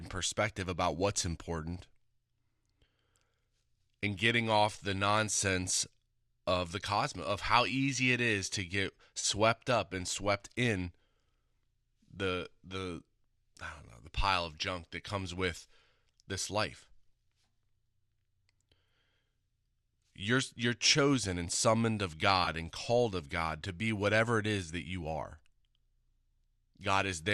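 At 9.20 to 9.25 s, between "it is to get" and "up and swept in", and again at 22.45 to 22.48 s, between "chosen and summoned of" and "and called of", there is AAC frame loss with concealment. About 30 ms and then 20 ms of coded audio went missing, which suggests roughly 10 ms frames, consistent with the light AAC-ELD low-delay coding likely in use. The decoder patched each gap from the last good spectrum, so the speech briefly turns smeared and noisy. On a spectrogram, harmonic lines blur into a short, evenly spread noisy strip. In the waveform, the envelope holds but its fine structure loses coherence.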